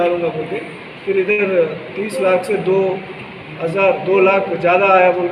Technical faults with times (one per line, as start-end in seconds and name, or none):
1.31-1.40 short stall from a late packet